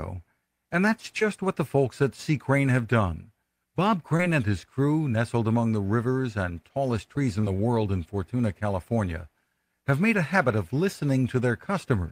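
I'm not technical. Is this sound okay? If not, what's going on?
No. There is short concealed packet loss at 1.19–1.23, 4.17–4.21 and 7.41–7.45 seconds. Tiny bits of speech arrived late, so the receiver briefly stretched the previous sound to cover each gap, causing a quick smear or wobble.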